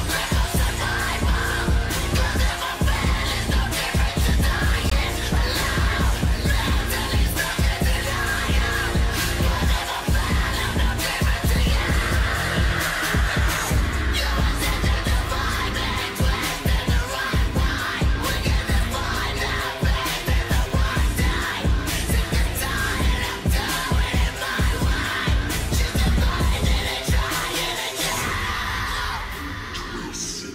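At 4.90 s there is a block of digital silence. For about 17 ms, the sound drops to silence. The signal does not fade out or back in. It jumps straight to silence and then straight back to the sound. Each of those hard edges makes a sharp step in the waveform. So the gap is heard as a short hole in the sound.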